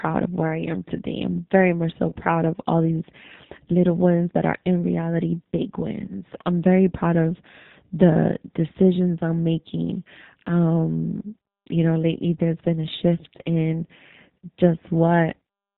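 Throughout the speech, the signal has passed through a G.729 codec. At what sounds like 8 kbit/s, it rebuilds each 10 ms slice from a vocal tract filter, a pitch predictor and a handful of pulses. Everything above 4 kHz is gone, so the voice is dulled and narrow, and the codec damage is plainly audible as a rough, slightly synthetic grain on every syllable.

At 2.10 s, between "I'm very much so" and "of all these little", VoIP packet loss concealed by the speech codec sets in. About 20 ms of data went missing, which fits two lost 10 ms frames. The decoder filled the gap by extending its last pitch and filter at falling gain, and the effect lasts around 46 ms because recovery takes time. It is heard as a brief smear that fades before the voice firms up again.

At 6.08 s, between "are in reality big" and "I'm very proud of", the same thing recurs. Another roughly 20 ms gap is concealed, and the weakened stretch runs about 50 ms before normal decoding returns.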